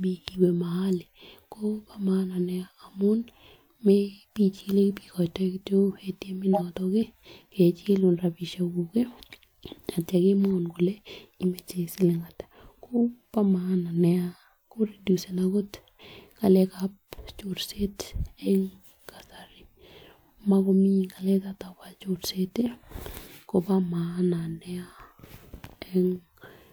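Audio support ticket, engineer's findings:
Corrupt frame decoded: brief chirp/noise bursts at 6.53–6.61 s and 18.42–18.50 s. Decoder played damaged frames; misread codes or gains put energy at wrong frequencies, roughly one and two frames' worth.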